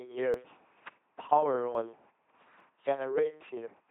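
From start to finish the speech runs through an LPC-10 vocoder at 2.4 kbit/s, and it's heavily mangled. The codec rebuilds each moment from a small all-pole filter fed either by a buzzy pulse train or by noise, with nothing in between, so the result comes out flat and robotic. Where the voiced/unvoiced call goes wrong you hear stray buzz or hiss.

On top of that there are three sudden skips, at 0.34 s, 1.75 s and 2.60 s. Each one is a jump, with the sound skipping straight ahead and no gap of silence. The first two lose roughly a tenth of a second each, and the third loses something nearer 40 ms. That pattern is likely a dropped buffer (overrun), where the input wasn't read in time, the hardware overwrote that chunk, and the two ends got spliced together.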